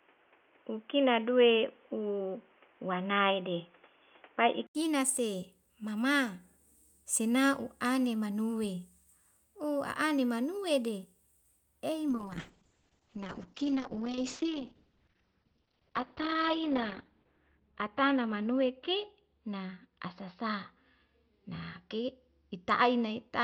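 Input switched to a poorer device, 0 to 4.75 s: the clip opens boxy and dull, with nothing above 3.5 kHz and a faint noise floor about 35 dB down. It is likely a narrower-band microphone or headset path, and at 4.75 s an 80 ms gap leads into fuller sound about 5 dB different in level.

Call bitrate drop, 12.1 s to the end: the encoder's budget falls from 64 to 7 kbps, and the band shrinks from 20 kHz to 6 kHz. The speech turns muffled and watery, roughest during the 4.65 s spent at the lowest rate.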